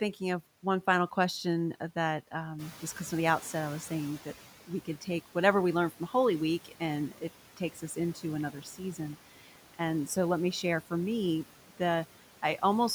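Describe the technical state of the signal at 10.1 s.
At 10.1 s the background noise drops away in the pauses and swells back under the speech. These are noise suppressor artifacts, present throughout. Frame by frame, the suppressor cuts bands it judges to be steady noise by about 12 dB, working against room noise about 18 dB below the speech.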